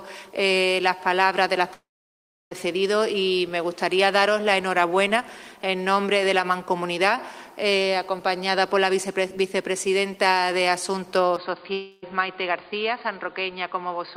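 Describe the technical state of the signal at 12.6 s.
The input has likely switched to a poorer device from 11.37 s to the end at 14.17 s, cutting everything above 4.8 kHz. The sound turns dull and slightly quieter, with a new faint noise floor and no gap at the switch.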